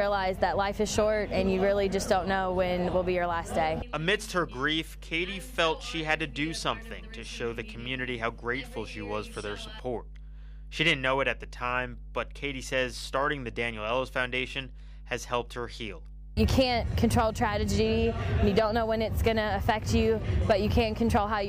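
From start to finish there's mains hum, a steady 50 Hz drone sitting fairly loud under the sound, roughly 15 dB below it. That's the power line leaking into the signal, probably through a ground loop or a transformer sitting too close.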